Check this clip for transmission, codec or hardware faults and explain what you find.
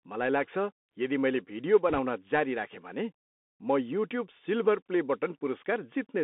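Two faults are audible in the speech.

Bluetooth CVSD headset codec, throughout: the audio is confined to roughly 200 Hz to 3.6 kHz, which fits a 64 kbps CVSD link. Its one-bit delta coding cannot track fast high-frequency swings, so sibilants turn scratchy over a grainy hiss, and the damage is plainly audible.

Bit errors on a Bluetooth voice link, 1.89 to 1.99 s, between "मैले भिडियो" and "जारी राखेँ": flipped bits, at an error rate of around 1.5 percent, nudge the decoder's steps the wrong way. Because each error fades quickly rather than producing a hard click, the result is a brief rushing crackle.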